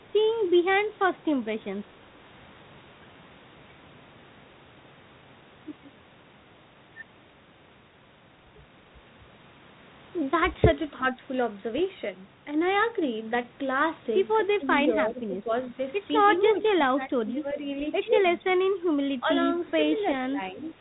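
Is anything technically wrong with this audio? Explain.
Yes. From 11.75 to 11.79 s there is a brief pop with a rough, crackly burst and a flicker in level. These are bit errors on an ADPCM link: flipped bits knock the decoder's predictor and step size off track, so each error smears into a short rough patch.

The speech dips or breaks up at 14.57 to 14.66 s, 15.09 to 15.5 s, 16.95 to 17.62 s, 18.41 to 18.46 s and from 20.29 s to the end, falling by roughly 10 to 15 dB. This is likely speech suppressed in double talk: with both sides talking, the echo canceller turned this side down along with the echo.

From 19.5 to 19.71 s a faint copy of the speech trails about 377 ms behind, roughly 25 dB below the voice. This is likely an echo leak: a loudspeaker's output reached a microphone, and the echo canceller let part of it back down the line.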